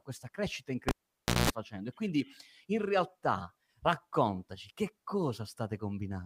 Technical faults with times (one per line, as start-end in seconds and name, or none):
0.89-1.50 cable pulled and plugged in